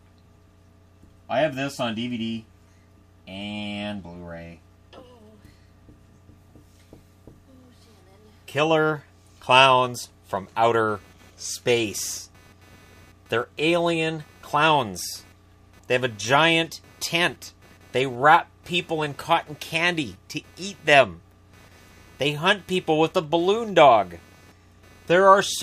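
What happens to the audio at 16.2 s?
At 16.2 s a computer activity noise is present, running from 10.88 s to the end: a buzzy, chirping pulse train near 300 Hz, roughly 35 dB below the sound. Shifting processor or graphics load is disturbing the audio ground. Unlike steady mains hum, it isn't locked to 50 or 60 Hz and fluctuates with machine activity rather than the sound.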